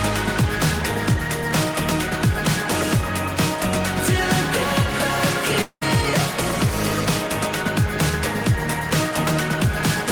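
At 5.61 s the audio breaks off until 5.83 s. The last sound carries on as a buzzy, fading hiss for about 199 ms. About 60 ms of near silence follows. The sound then resumes at 5.83 s, but about 200 ms of material is gone, so it jumps forward. This is likely a long network dropout. Nothing arrived for that stretch, so the receiver stretched out the last audio before falling quiet.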